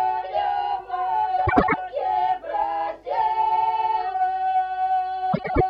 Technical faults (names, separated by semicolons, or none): frames out of order